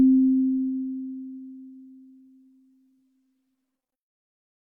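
No technical faults can be heard anywhere in this recording. The audio holds steady throughout, with nothing breaking into it or interrupting it at any point.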